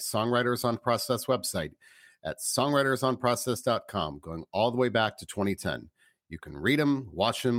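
At 0.61 s there is a lost LE Audio frame. About 7.5 ms of sound goes missing, which fits a single LC3 frame dropped on the Bluetooth LE Audio link. The decoder fills the gap with the last good spectrum, flipping its signs at random. So the speech does not cut out. Instead, any tonal part turns into a short burst of noisy smear. It is too brief for any fade to set in.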